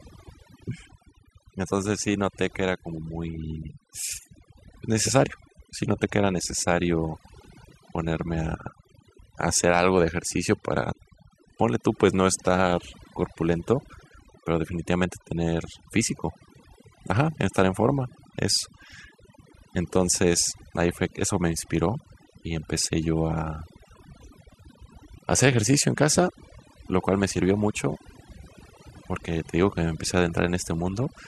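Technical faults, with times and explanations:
Throughout: overdone noise removal. The noise reduction is set so aggressively that frequency bands near its noise estimate are pulled far down or cut entirely. Quiet parts of the speech are removed along with them. The background drops and breaks up into twinkling specks.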